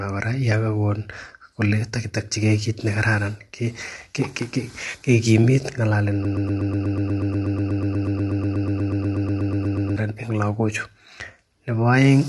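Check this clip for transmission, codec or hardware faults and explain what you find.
Two faults are present: codec damage across the whole speech recording, and a stuck repeating fragment in the second half.

Low-delay AAC compression, likely AAC-ELD, runs throughout. Its short frames resolve the voice's harmonics poorly, and the bit budget is consistent with about 32 kbps. The speech sounds rough and grainy, with noise filling between harmonics and nothing above 11.5 kHz.

A broken-record loop runs from 6.25 s to 9.96 s. The stream likely stalled and kept resending the last fragment it held, a piece about 0.12 s long, repeated back to back roughly thirty times. The result is a rapid stutter, and the speech that belonged in those 3.7 seconds is lost.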